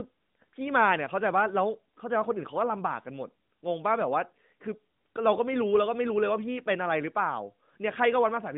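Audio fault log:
No faults detected in this clip.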